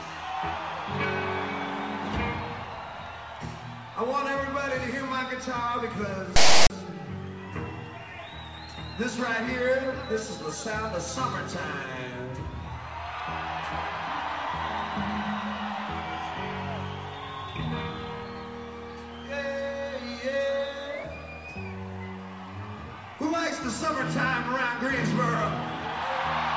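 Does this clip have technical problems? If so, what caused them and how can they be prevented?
Yes. A block of metadata was decoded as samples, so file tags were played as audio from 6.36 to 6.70 s. The text bytes produce a loud, one-sided rasp with hard edges, and the zero padding after them drops briefly to silence. Prevent it by having the reader parse and skip tag chunks rather than treating everything after the header as sample data.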